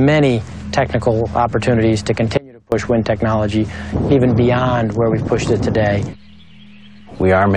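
At 2.37 s the sound drops out abruptly and returns at 2.72 s, a gap of about 0.35 s. This is an audio dropout to a faint residue: the signal was likely lost upstream while the rest of the chain stayed live, so a faint leak, roughly 25 dB below normal level, remains. The waveform collapses to a thin band with sharp edges, and the spectrogram shows a dim vertical strip between sudden cut-off and resumption.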